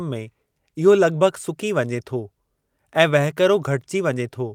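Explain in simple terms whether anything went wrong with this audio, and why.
Nothing went wrong with this speech recording. Listening through, there is no point where the sound breaks up, jumps or changes in a way that would point to a technical problem.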